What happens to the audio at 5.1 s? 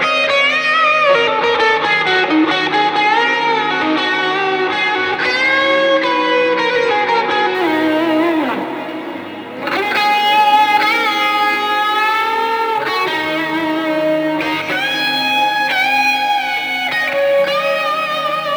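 Nothing goes wrong at 5.1 s; the audio plays through that moment without any dropout, glitch or other fault.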